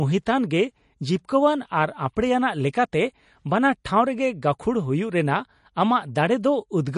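From start to finish, the speech has a hard ceiling with nothing above about 10.5 kHz, and a watery, swirling texture that is plainly audible. This is most likely MP3 compression at a low bitrate, which fits roughly 40 kbps, where the encoder runs short of bits, cuts the treble and lets weak frequency lines flicker in and out between frames. That flickering sets it apart from a simple low-pass filter, which dulls the top without the swirl.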